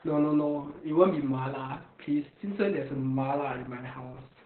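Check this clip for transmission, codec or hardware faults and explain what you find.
One codec fault runs through the whole clip. From start to finish the speech sounds muffled, hoarse and faintly robotic, with nothing above about 4.3 kHz. This is heavy Opus voice compression: the SILK coder, squeezed to narrowband at a rate that points to roughly 8 kbps, cuts the top of the spectrum and codes the excitation coarsely.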